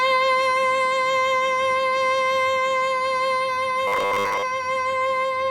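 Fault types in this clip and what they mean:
Robotic sound from repeated short buffers: From 3.88 to 4.44 s the music turns into a rigid, metallic buzz fixed at 100 Hz. That pitch fits a 10 ms slice being looped. Most of it is repeats, likely because new audio arrived too seldom.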